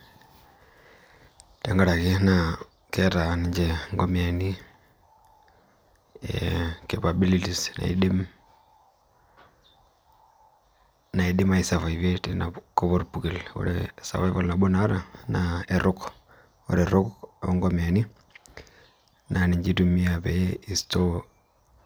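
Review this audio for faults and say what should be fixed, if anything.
Nothing stood out on listening, so there is nothing here that needs fixing.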